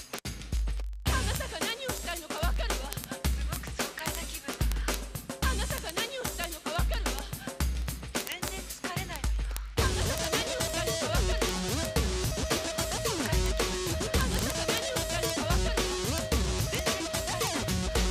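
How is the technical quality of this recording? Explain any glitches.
The recording is marred by word clock ticks throughout, from 0.12 s to the end. An unlocked receiver clock drifts roughly 0.1% against the sender, slipping a single sample about every 20 ms. The result is a steady, sharp buzz-like ticking of uneven strength, unlike random vinyl-style crackle.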